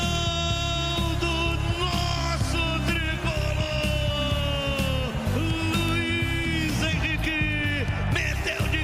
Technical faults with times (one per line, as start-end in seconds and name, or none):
0.15-8.62 word clock ticks